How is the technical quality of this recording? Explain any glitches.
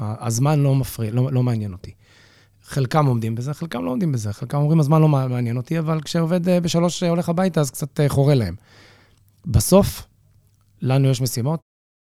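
Nothing stood out on listening to this speech recording, and the smooth fade out that begins at about 11.5 s and ends at 11.63 s is an ordinary editing touch rather than a glitch.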